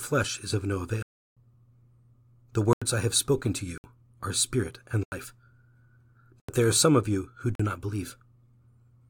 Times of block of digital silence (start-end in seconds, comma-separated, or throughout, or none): 1.02-1.37, 2.73-2.82, 3.78-3.84, 5.03-5.12, 6.40-6.49, 7.55-7.59